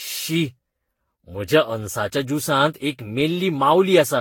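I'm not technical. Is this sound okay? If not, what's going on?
No. Throughout the speech there is generation loss: a swirly, hollow, smeared quality, with the starts of sounds blurred. It likely comes from being compressed and re-saved about ten times, each pass adding fresh damage, so it sounds worse than a single heavy compression would.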